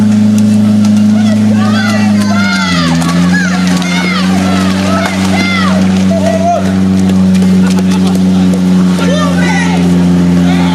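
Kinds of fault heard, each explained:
Gain pumping: Through the whole clip the level keeps breathing. It gets pushed back down each time something loud comes in, with a swing of roughly 5 dB. The likely cause is input gain set way too hot, with a fast limiter or compressor clamping down on every peak. That leaves loud and quiet parts sitting closer together, so everything sounds squashed and a bit restless.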